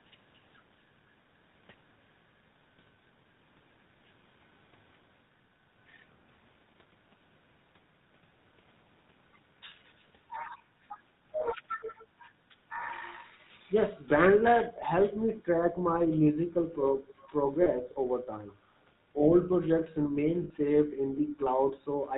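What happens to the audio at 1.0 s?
At 1.0 s the speech has a buzzy, gravelly roughness and nothing above 4 kHz, as it does for the whole clip. This is the GSM full-rate codec, which fits a 13 kbps coder: it models the vocal tract and drives it with sparse, regularly spaced pulses, keeping only every third excitation sample.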